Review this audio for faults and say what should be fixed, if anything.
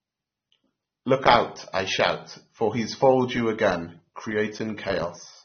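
The whole clip is band-limited, with nothing above about 6.3 kHz. The speech sounds dull and smeared, with a fizzy, warbling texture on sibilants. This is likely AAC compression. The damage fits AAC-LC at a low bitrate, near 27 kbps. Encode at a higher bitrate, or keep an uncompressed master, to prevent it.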